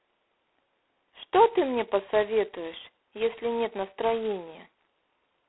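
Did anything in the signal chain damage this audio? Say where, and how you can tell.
Yes, at the codec stage: G.726 ADPCM at a very low rate, which fits 16 kbit/s, damages the speech throughout. The coarse prediction error becomes a harsh, rasping hiss that rises and falls with the speech level, confined to a telephone band of 300 Hz to 3.4 kHz, with nothing above 3.9 kHz.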